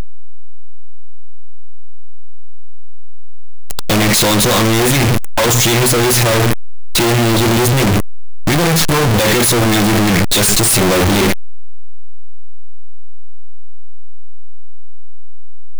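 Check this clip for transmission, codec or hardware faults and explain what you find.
One fault runs through the whole speech clip: signed and unsigned mixed up. The 8-bit samples were likely read with the wrong sign convention, which flips the top bit, so every zero crossing jumps across the full range. The result is harsh, very loud distortion from start to finish, with quiet stretches as loud as the rest.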